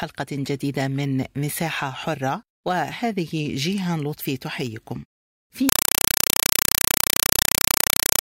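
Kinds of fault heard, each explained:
Compressed stream played as audio: from about 5.69 s to the end at 8.24 s the speech drops out and you get loud, chattering static instead. A Dolby Digital (AC-3) bitstream is being pushed through as if it were ordinary samples rather than decoded, so each coded frame plays as a 4 ms burst of noise followed by silent padding. That repeats 31.25 times a second, and the 4 ms burst length fits a 192 kbps AC-3 stream.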